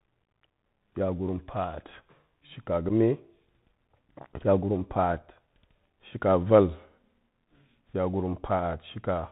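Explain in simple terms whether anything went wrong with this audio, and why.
The speech sounds thin and muffled from start to finish, with scratchy s sounds and a grainy hiss underneath. That is the Bluetooth CVSD headset codec, the basic phone-call format for headsets, which throws away everything above about 4 kHz and builds the sound from tiny up-or-down steps.

At about 2.9 s there is a very brief dropout, a tiny hole of about 7.5 ms with a sharp edge. This is unconcealed Bluetooth headset packet loss. A single small chunk of sound between headset and phone never arrived, and nothing filled the gap.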